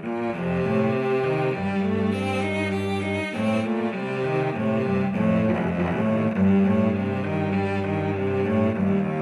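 No technical faults can be heard in this audio. There is nothing at any point in the recording that stands out as a problem.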